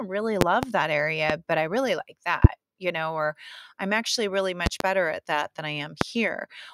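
Sharp loud pops cut through the speech at 0.41–0.66 s (a double pop), 1.30–1.33 s just before "but i really like", 2.44–2.48 s, 4.66–4.84 s (another double) between "or I'm actually really" and "better at that than", and 6.01–6.05 s after "at that than I". They peak about 20 to 25 dB above the speech. The likely cause is voltage spikes from a plug, switch, static or driver glitch.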